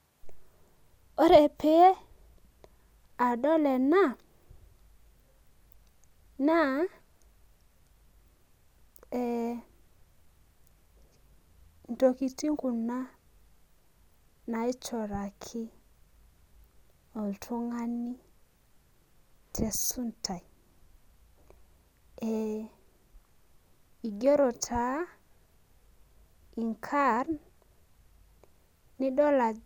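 No technical faults can be heard in this speech recording.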